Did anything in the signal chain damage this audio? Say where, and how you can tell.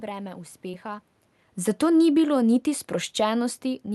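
Yes, two spots. At the network and jitter-buffer stage there's a short concealed packet loss from 0.71 to 0.75 s. About 20 ms of audio never arrived, and the decoder patched roughly 17 ms by extending the preceding sound, so you get a brief smear there.

In the call processing, the automatic gain control pulls the level down between 1.66 and 2.37 s, by about 5 dB. The tell is that the room background sinks right along with the voice, which a talker moving wouldn't do.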